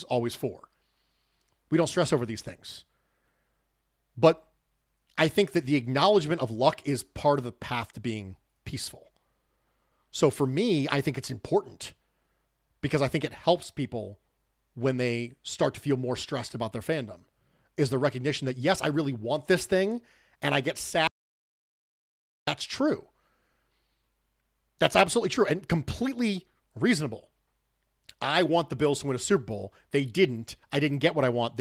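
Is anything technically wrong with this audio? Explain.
Yes. At 21.07 s, just after "thing and I get", there is an audio dropout to silence lasting about 1.4 s, until 22.47 s. The speech cuts off mid-flow and resumes abruptly, with silence between and no room tone. The likely cause is a momentary loss of the input signal while recording continued, writing silence in its place. On a waveform this is a flat line; on a spectrogram, a blank vertical strip across all frequencies.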